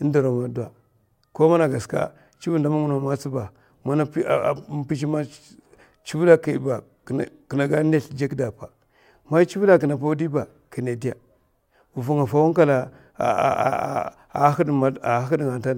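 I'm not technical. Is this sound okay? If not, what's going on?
Yes, nothing stood out as a problem when listening to this speech recording.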